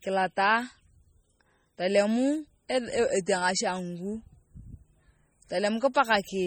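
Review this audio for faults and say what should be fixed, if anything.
Throughout the speech the sound has a watery, swirling quality, with metallic chirps on s sounds and smeared attacks, though content reaches up to about 20.9 kHz. This is likely MP3 compression, and the heavy damage fits a bitrate of around 32 kbps. With that few bits, the encoder zeroes weak frequency lines, and they flicker on and off from frame to frame, producing the swirl and chirps. Re-export from the original source at a much higher bitrate or in a lossless format.

At 2.69 s and 5.94 s, a brief hiss comes just ahead of a sharp attack, which sounds soft rather than crisp. This is pre-echo, spreading about 10 ms and 14 ms respectively. The codec spreads quantisation noise across a whole block, so when an attack lands late in a block, noise sized for the loud onset also fills the quiet moment before it. A higher bitrate or an encoder with good block switching would prevent it.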